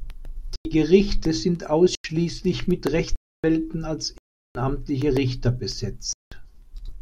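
Five times the speech drops into dead digital silence, cutting out and back without a fade. These blocks of digital silence fall at 0.56 to 0.65 s, 1.95 to 2.04 s, 3.16 to 3.44 s, 4.18 to 4.55 s and 6.13 to 6.32 s. Their lengths, about 93, 93, 279, 372 and 186 ms, are all multiples of one block, which fits a 4096-sample output buffer that went unfilled in time and was sent out as zeros.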